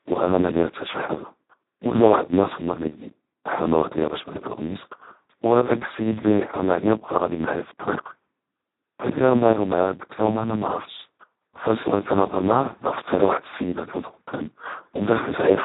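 Throughout the speech, heavy Speex codec damage makes it hoarse and robotic, as at about 2 kbps. Nothing is heard above 3.8 kHz.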